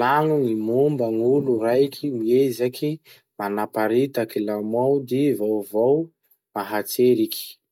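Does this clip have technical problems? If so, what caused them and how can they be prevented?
No, this clip has no technical problems, so there is nothing that needs preventing.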